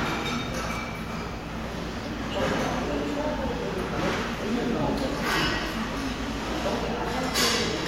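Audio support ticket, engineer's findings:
Loose connector crackle, 0.71–0.76 s and 5.31–5.43 s. Irregular scratchy bursts, roughly 50 ms and 120 ms. Probable component: worn or dirty plug/jack contact. Contact intermittently breaking under movement, chopping the signal.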